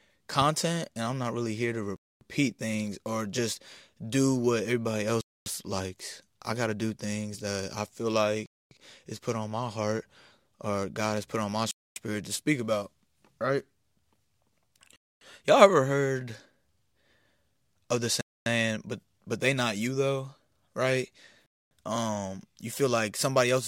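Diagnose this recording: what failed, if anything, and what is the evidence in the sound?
Gap between chunks at the storage or playback stage: the speech stops dead for 250 ms at 1.96, 5.21, 8.46 (after "things that I feel"), 11.71, 14.96, 18.21 and 21.46 s, the silences landing every 3.25 s. Each 3.0 s block plays whole, then a hard-edged hole opens before the next starts late, so the speech is interrupted but nothing is missing. A packet-loss dropout would erase speech at irregular points; here the speech resumes intact after each silence.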